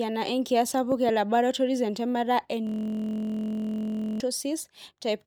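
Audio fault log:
0.92–1.11 s: loud pop. Two sharp pops, roughly 15 dB above the speech, which carries on underneath. Likely a sudden voltage pulse, such as a plug or switch.
2.67–4.20 s: system hang loop. The system froze and one 23.22 ms piece of audio repeated, giving a steady 43.1 Hz buzz, which fits a 1024-sample buffer.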